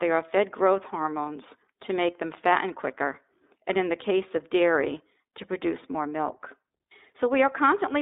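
From start to end, the speech carries the sound of the iLBC codec. The band is narrow, running from about 250 Hz to 3.7 kHz, so the low body and all the upper air are gone. Each short frame, fitting 20 ms frames at around 15.2 kbps, is coded on its own without leaning on the one before. The damage is plainly audible. Voices come through clear but rough, with a thin, synthetic edge.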